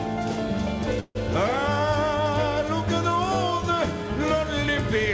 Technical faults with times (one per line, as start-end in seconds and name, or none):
1.00-1.17 call audio freeze